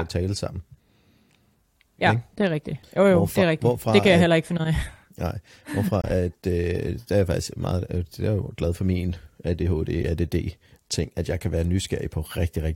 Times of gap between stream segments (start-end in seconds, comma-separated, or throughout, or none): 6.02-6.04, 10.03